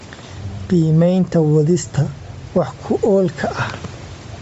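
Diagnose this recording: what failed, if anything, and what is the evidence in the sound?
The level behaves like gain pumping, across the whole recording. The gain swings by around 10 dB, so loud and quiet passages sit unnaturally close together and the sound feels squashed. This points to the call processing or gain stage: input gain set far too high, with a fast limiter or compressor likely pulling it down on each peak and releasing it in the gaps.

Throughout, the speech also carries a breathy, grainy edge, with the upper band thinned out and partly replaced by noise, which fits heavy Bluetooth LC3 compression. At the codec stage, LC3 likely ran at a low bitrate, consistent with about 32 kbps and 10 ms frames. At that rate the encoder discards much of the high spectrum and fills it with noise. Nothing is present above 8 kHz, and that limit comes from the call microphone processing.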